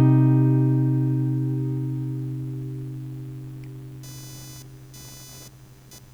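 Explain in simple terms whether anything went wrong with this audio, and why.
From about 4.03 seconds to the end, a buzzy, chirping noise runs quietly underneath the sound, pulsing a few hundred times a second. This is computer activity noise: the computer's changing workload disturbs the shared electrical ground of the audio circuit, leaking its rhythm into the recording.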